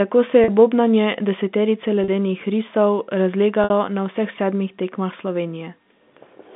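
A brief buzzy hold, as if the sound catches on one pitch, interrupts the speech at 0.44 to 0.48 s (between "tako se" and "bobnanje deseterice"), at 2.04 to 2.08 s (just after "bobnanje deseterice") and at 3.64 to 3.70 s. These are packet losses with pitch repetition. About 40, 40 and 60 ms went missing, which fits two, two and three 20 ms packets. The receiver filled each gap by repeating the last pitch period across the narrowband G.711 line.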